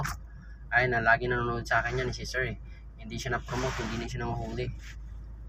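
No technical faults can be heard anywhere in this audio. Nothing in it needs a timestamp or a repair.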